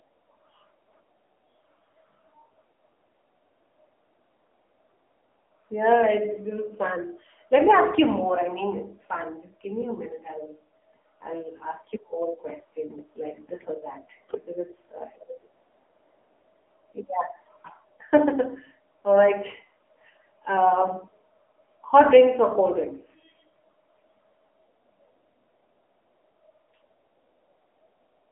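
Speech, coded throughout with an AMR narrowband mobile codec. Nothing above 3.8 kHz remains. The buzzy, synthetic tone points to a low rate near 7.95 kbps.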